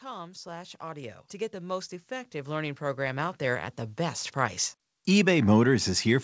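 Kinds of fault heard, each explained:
Automatic gain rising: the gain control judged the speech too quiet and kept raising it, so voice and background swell together by about 17 dB over four seconds.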